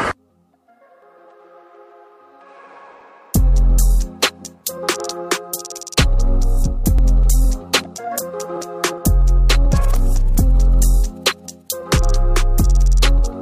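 At 6.99 s there is an overlap between stream segments. Two segments, each about 2 s long, carry timestamps that overlap. The player trims the overlap, but that sound was never actually repeated. About 19 ms of audio goes missing. The waveform jumps, causing a brief click or skip.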